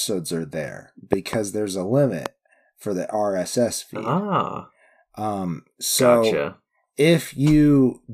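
At 1.13 to 1.35 s a loud pop sounds as a double pop, and at 2.26 to 2.28 s as a single pop. Each peaks about 15 dB above the speech, which continues underneath. The likely cause is a voltage pulse from a switch, plug or static discharge.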